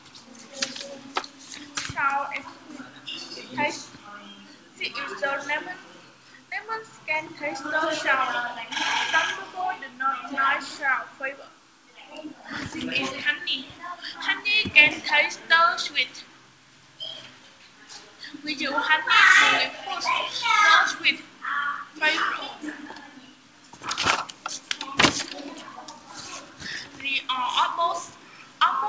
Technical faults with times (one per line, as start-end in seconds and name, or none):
none